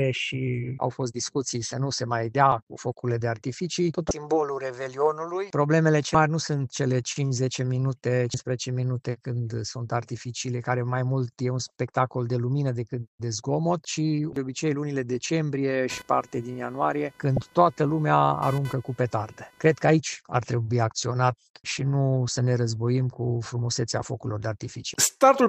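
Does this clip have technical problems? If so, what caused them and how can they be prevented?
Yes. Damaged data in a compressed stream: corrupted or missing bytes made the decoder misread frames, lose sync and hunt for the next header, producing brief chirps or blips at 4.08–4.11 s, 6.12–6.15 s, 8.31–8.34 s and 17.37 s. Using checksummed containers and reliable transfer or storage, and re-copying from the original, prevents it.

Computer activity noise: processor or graphics load shifts disturbed the audio circuit's shared ground, adding a buzzing, pulsing whine around 500 Hz, roughly 25 dB below the sound, from 15.90 to 19.92 s, tracking the machine rather than the audio. A ground-isolated or external USB interface avoids this.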